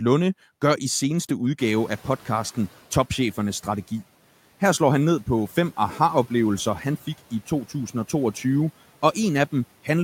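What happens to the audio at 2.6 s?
At 2.6 s the background noise is still too loud and sinking, the tail of a noise suppressor catching up from 1.59 to 2.79 s, just after "gør i seneste". The room noise jumped by about 21 dB near 1.5 s, and the suppressor's estimate took 1.2 s to follow, cutting about 7 dB once it adapted.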